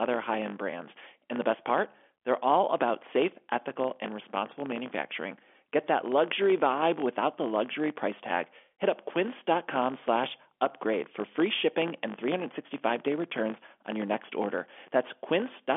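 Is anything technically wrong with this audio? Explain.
Yes. Throughout the speech there is a filter restarted on every block. Each block starts from silence with a small transient, giving a 50 Hz buzz that points to 20 ms blocks. Unlike mains hum, it rises and falls with the speech level. It rides on top of telephone-band G.711 audio that stops around 3.6 kHz.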